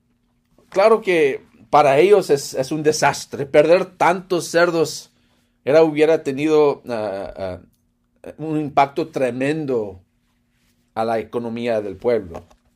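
Hard clipping appears four times in this speech. From 1.75 to 2.14 s, just before "es es un", peaks overrun the signal path by about 3 dB and are cut flat. Right after "es es un", from 3.06 to 3.09 s, it overruns by about 4 dB. From 3.57 to 4.09 s, it is about 3 dB over. From 8.78 to 8.81 s, after "ah un", it is about 2 dB over. Each flattened top adds high harmonics, heard as a gritty crackle on the loudest moments.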